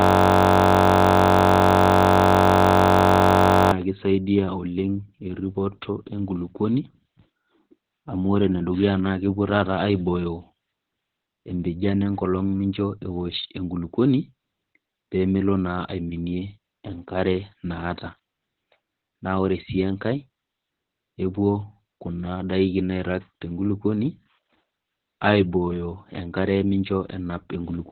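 This speech clip opens with a system hang loop that is already under way and lasts until 3.72 s. A 21.33 ms slice repeats over and over, producing a steady buzz at 46.9 Hz. That fits a frozen system cycling a 1024-sample ring buffer. Heavy Opus voice compression runs throughout. Nothing is present above 4.4 kHz, so the speech sounds narrowband, muffled, hoarse and slightly robotic. That points to the SILK coder at a bitrate near 8 kbps, with coarsely coded excitation.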